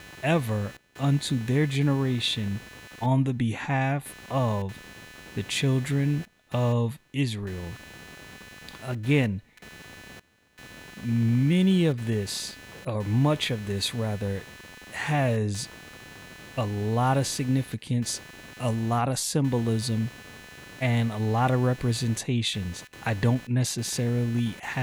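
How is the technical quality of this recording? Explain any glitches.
The recording has one real problem: computer activity noise runs through the whole speech clip. Processor or mouse load is wobbling the shared ground, leaving a buzzy chirp pulsing around 300 times a second, roughly 20 dB under the voice.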